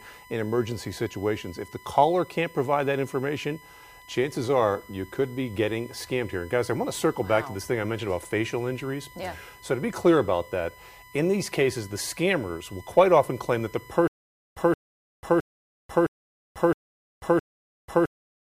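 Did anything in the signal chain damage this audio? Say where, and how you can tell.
Yes. USB whine runs through the whole clip: a steady tone at 1 kHz, strongest at its 2 kHz harmonic, sitting roughly 25 dB under the signal. Current drawn in the bus's 1 ms frames is leaking into the analogue path through shared power or ground.

Stutter with silent gaps begins at 14.08 s and continues to the end. The same 172 ms burst repeats six times, each followed by 491 ms of digital silence, every 663 ms. This is likely a stalled player or stream buffer replaying its last fragment, losing the audio meant for those gaps.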